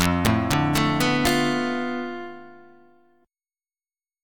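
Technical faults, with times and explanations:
0.01–1.29 s, integer overflow: the signal is driven about 4 dB past the integer limit, and instead of being held at full scale each peak wraps to the opposite sign, jumping across the whole range. That produces violent cracks on the loud parts, far harsher than clipping.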